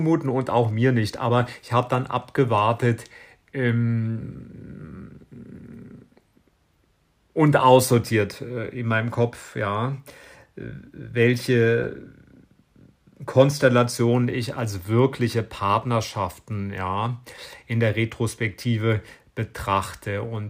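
Repeated buffer at 6.29 to 6.32 s and 11.84 to 11.86 s: audio arrived late, so a 21 ms slice, which fits a 1024-sample buffer, played twice, causing a brief stutter-click at the hard join.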